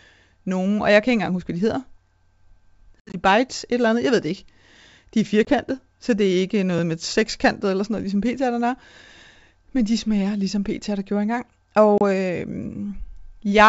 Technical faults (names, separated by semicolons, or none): packet loss on an ADPCM call